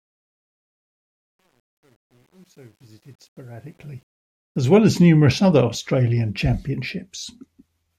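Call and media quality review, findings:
Truncation distortion on a fade, 0.0–4.79 s, worst 0.0–3.6 s. Speech fade-in sounds gritty at low level, then clears once full level is reached at 4.79 s. Probable component is a fade or gain stage that rounds samples to coarse steps without dither. The step size fits roughly 10-bit resolution, so quiet passages collapse into square staircases.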